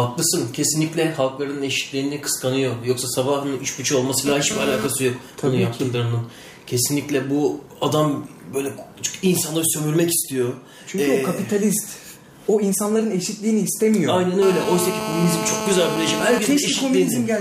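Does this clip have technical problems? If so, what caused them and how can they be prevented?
Yes. GSM phone buzz sits from 4.27 to 4.87 s and from 14.42 to 16.39 s, about 5 dB below the signal: a raspy 217 Hz buzz dense with harmonics, from a nearby 2G handset's bursts being rectified in the audio circuit. Its harsh, many-harmonic timbre and 217 Hz rate distinguish it from smoother 50 or 60 Hz mains hum. Keep phones well away from microphones, cables and interfaces.

GSM signalling bursts follow from 16.45 to 17.29 s, roughly 20 dB down. The same rectified radio pulses arrive in short groups, as when a phone user in a call falls silent, giving even ticks with a longer buzz twice a second rather than a continuous tone. Switching phones off or to flight mode prevents it.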